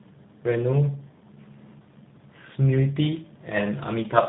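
Throughout, tandem speech coding: two low-rate coders in series, consistent with G.726 then G.729A, stack rough, warbly artefacts beyond one codec's, with nothing above 3.9 kHz.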